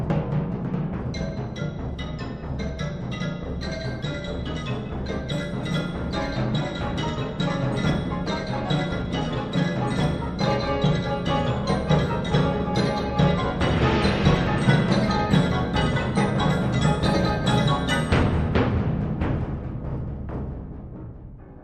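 No audible technical faults present.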